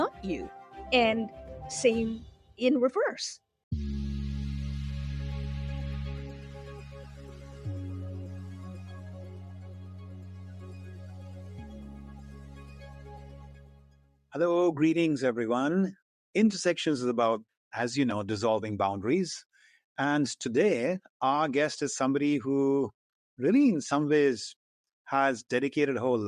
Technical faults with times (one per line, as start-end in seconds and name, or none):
0.00-26.27 noise suppressor applied to music or sounds
0.49-0.80 sound cut by the noise suppressor
1.29-1.45 sound cut by the noise suppressor
2.31-2.60 sound cut by the noise suppressor
6.25-14.32 sound cut by the noise suppressor